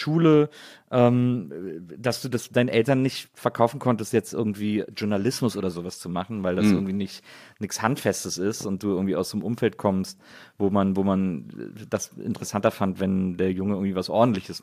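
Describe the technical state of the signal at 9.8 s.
At 9.8 s the speech signal is intact, with no audible fault at that moment.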